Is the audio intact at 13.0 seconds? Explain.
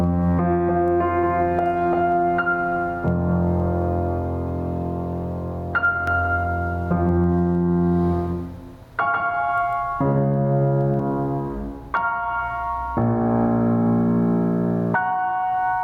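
No. Throughout the music, gain likely set far too high lets a fast limiter clamp down on each loud hit, causing gain pumping: loud and soft parts are squashed closer in level, with the gain swinging about 10 dB.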